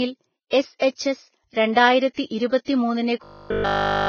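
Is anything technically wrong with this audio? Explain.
Yes. The speech has three problems.

Throughout, the sound is hissy and grainy. This is likely Vorbis compression at a low bitrate, around 16 kbps. The codec cuts the treble and quantises the remaining detail so coarsely that it turns into noise.

At about 2.14 to 2.17 s there is pre-echo. A short hiss, about 38 ms long, comes just before a sharp attack. The codec spreads its noise across the whole block, so the quiet moment before the attack gets filled too.

From 3.24 s to 4.08 s the speech becomes a rigid, metallic buzz at 50 Hz. The likely cause is robotic sound from repeated short buffers. The same 20 ms slice plays over and over while the real audio is skipped.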